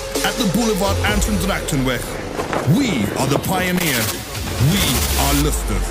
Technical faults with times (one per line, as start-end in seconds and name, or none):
3.76-3.84 loose connector crackle